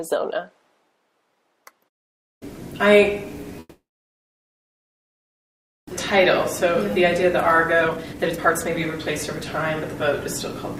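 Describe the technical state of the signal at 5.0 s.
At 5.0 s the signal sits inside a gap from 3.59 s to 5.93 s. This is likely a long network dropout. The last sound was stretched into a fading fill, leaving silence or low steady noise here. When audio resumes, about 1.6 s is gone.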